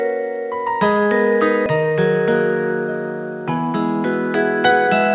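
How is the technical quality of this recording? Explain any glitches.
The recording has one clear glitch, heard through a narrowband telephone-style call path that leaves nothing above 4 kHz. At 1.66 to 1.68 s there is a skip ahead: about a second of audio was dropped in transit or by the jitter buffer, so playback jumps forward with no gap and the two sides join abruptly.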